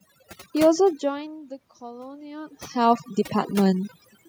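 From the start of the speech to its end, overdone noise removal is at work. The noise reduction is set too strong for this room noise. It pushes individual frequency bands far down whenever they sit near its noise estimate. Quiet parts of the voice are cut along with them. So the background drops and breaks up, dotted with twinkling specks.

From 0.79 s to 3.98 s comes an automatic gain rise. Around 1 s the talker moves away, and the level reaching the microphone falls by about 19 dB. The automatic gain control hears the input as too quiet and raises its gain slowly, by about 6 dB over roughly three seconds. Voice and background swell together. The lift is gradual, not a sudden step.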